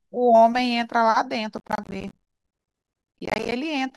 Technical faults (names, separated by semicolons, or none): processor overload crackle